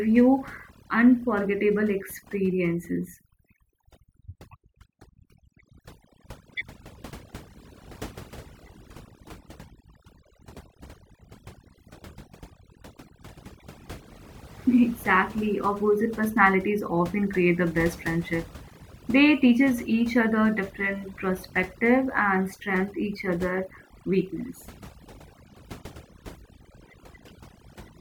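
Overdone noise removal runs through the whole speech clip: a noise reducer set too aggressively cuts individual frequency bands whenever they sit near its noise estimate, leaving sparkling residue in near-silent gaps, unlike a noise gate, which mutes everything at once.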